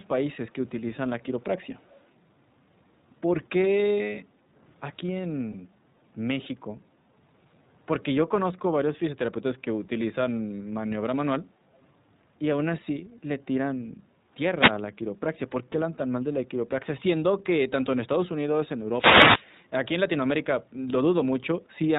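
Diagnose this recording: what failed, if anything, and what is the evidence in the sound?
iLBC codec, throughout: a codec-stage fault. The speech is band-limited to 4 kHz and carries a slightly rough, synthetic edge, plainly audible across the clip. That comes from iLBC coding each 20 ms frame's excitation independently, which fits a 15.2 kbps mode.

Echo leak, 1.64 to 2.04 s: a call-processing fault. A faint, delayed copy of the speech trails it by about 248 ms, well below the direct speech. This is likely the far end's echo canceller letting loudspeaker pickup through its microphone, so it returned down the line.

Background gated by the echo canceller, 4.25 to 4.52 s and 11.44 to 11.61 s: also call processing. The room sound dips by about 6 dB for roughly a third of a second, then a shorter moment, as the canceller clamped the microphone while the loudspeaker played and then released.

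Lost iLBC frames, 5.52 to 5.55 s: a network fault. One 20 ms frame went missing, and the decoder filled the gap with a repeated pitch cycle blended with noise, a brief buzzy hold. Because iLBC frames stand alone, normal speech resumes almost immediately afterward.

Wireless microphone noise hit, 14.54 to 14.77 s and 18.92 to 19.46 s: an analogue radio-link fault. Short swishes of static rise over the speech, the second longer. The FM signal faded through multipath cancellation, letting receiver noise surge until the carrier recovered.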